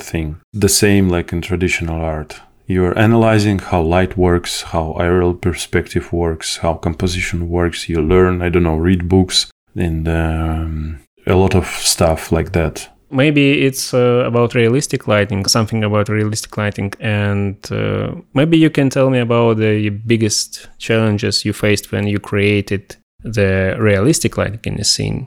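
A recording of speech with no technical fault to be heard anywhere in it. There is nothing here that calls for a time or a cause.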